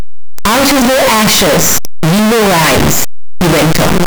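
A speech clip with signed and unsigned mixed up all the way through: it's a wall of harsh, clipped-sounding distortion where soft sounds come out as loud as strong ones. That's likely the 8-bit samples being read with the wrong sign convention, so every zero crossing jumps across the whole range.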